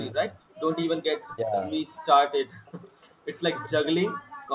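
Speech arriving over a call, band-limited to about 4 kHz as fits a narrowband G.711 path, shows three echo-canceller faults. The speech is suppressed in double talk at 0.13–0.37 s (about 15 dB down), 1.27–1.75 s (about 25 dB) and 3.67–4.28 s (about 40 dB, close to cutting out). The voice itself sinks or breaks up, most likely because the canceller could not separate it from far-end audio. An echo leak at 0.49–0.75 s and 2.65–2.92 s adds a faint copy of the speech trailing by 372 ms, about 30 dB and 25 dB below it. This is something added rather than something lost, and likely residual loudspeaker pickup. Between 2.51 and 3.25 s the background is gated by the echo canceller, with the room tone falling by up to 22 dB for around 400 ms in total. Here only the background drops, which tells it apart from double-talk suppression, where the speech itself is cut.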